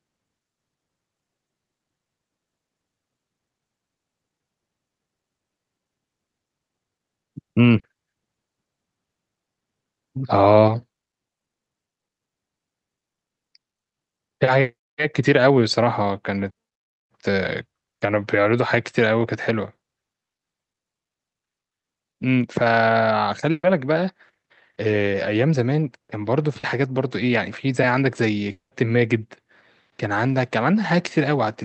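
Short concealed packet loss at 7.79 to 7.86 s: about 40 ms of audio arrived too late or not at all, and the receiver bridged the hole by extending the preceding sound before rejoining the real signal. The result is a quick smear in the speech, with that fragment simply absent.

A burst of packet loss follows at 23.51 to 23.66 s. Around 120 ms went missing in a row, so the concealment held the last sound as a buzz or hiss that faded out, dipping to near-silence for roughly 30 ms before the speech picks up further along, skipping what was lost.

A second short concealed packet loss at 26.59 to 26.66 s repeats the first: about 40 ms filled in from the preceding sound, heard as a brief wobble where that slice of speech is gone.

A long network dropout at 28.51 to 28.74 s removes about 200 ms. The gap begins as a stretched, fading continuation of the previous sound, then drops into about 130 ms of silence before the speech returns later on. 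This pattern likely points to a stall in the network connection rather than isolated packet loss.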